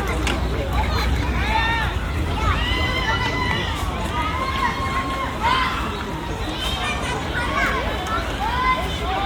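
No technical faults are audible.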